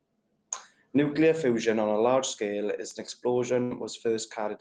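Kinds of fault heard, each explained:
Bit error spike: at 2.91 s a single corrupted sample jumps by a power of two and snaps straight back, giving one sharp broadband tick that bears no relation to the surrounding speech, the mark of a flipped bit in memory or on a digital link.
Burst of packet loss: from 3.63 to 3.74 s a run of packets never arrived in time. The receiver stretched the last sound for about 72 ms while fading it, then resumed with roughly 80 ms of speech skipped entirely.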